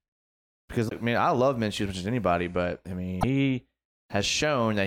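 A speech clip with damaged data in the compressed stream at 0.85–0.92 s and 3.18–3.24 s: corrupted bytes make the decoder misread frames and resynchronise, giving brief chirps, squawks, clicks or short holes of about 70 ms.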